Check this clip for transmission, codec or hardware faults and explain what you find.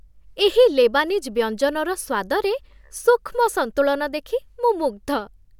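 Checking the clip turns up no faults to explain.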